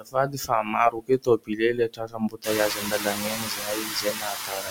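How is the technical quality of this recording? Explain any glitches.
The quality is fair but clearly processed: a noise suppressor is working hard here, and it's eating into the speech as well as the background.

Noise suppressor artifacts run through the whole clip. It pulls the steady background down by about 6 dB, frame by frame, so the leftover noise sinks between the words and rises under them.

Speech cut by the noise suppressor shows up from 0.0 to 0.75 s (dips of about 20 dB, roughly half a second in total) and from 0.91 s to the end (about 22 dB, roughly three seconds in total). The suppressor mistakes quiet consonants and word endings for noise and ducks them, so they sound swallowed. The room noise jumps by about 20 dB around 2.5 s and then sits only about 8 dB under the speech.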